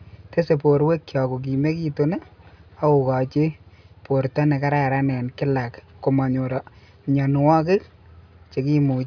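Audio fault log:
Nothing stood out on listening to this speech recording.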